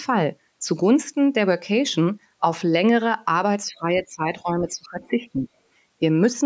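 From 3.68 to 5.48 s the echo canceller likely mistook simultaneous talk from both ends for echo and turned everything down, so this is speech suppressed in double talk. The talker's speech dips by roughly 15 dB and drops out in pieces, adding up to about one and a half seconds.

From 5.01 to 5.09 s the other side's voice is leaking through. The canceller likely failed to remove the far-end loudspeaker sound from the microphone. It leaves a brief, faint scrap roughly 30 dB below the talker's level.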